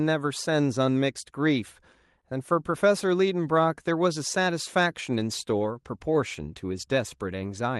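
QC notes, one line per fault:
5.22–7.63 s call bitrate drop: the speech turns coarse and duller for about 2.3 s, fitting an Opus encoder cut from 32 to 17 kbps, then recovers, unlike steady band-limiting.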